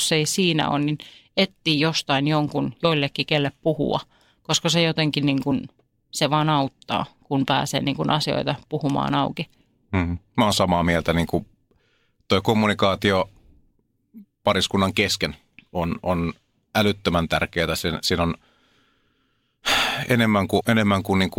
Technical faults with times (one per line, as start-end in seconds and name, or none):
2.83 compressed frames skipped
20.60 compressed frames skipped